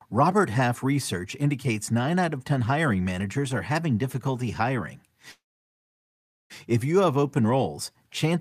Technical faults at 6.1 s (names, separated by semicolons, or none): call audio freeze